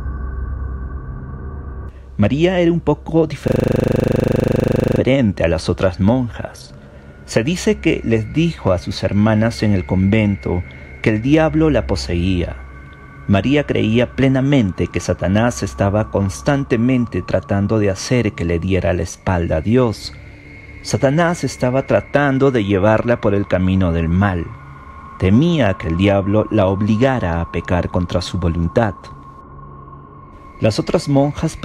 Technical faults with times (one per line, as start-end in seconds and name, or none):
3.48-5.00 system hang loop